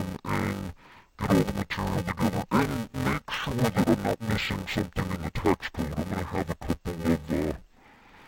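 Speech, with interleaved audio read as planar throughout. Each 2.9 ms block, which fits a 128-sample buffer, has its alternating samples split into halves, so the speech sounds dull and robotic, buzzing at 345 Hz with no clear octave shift.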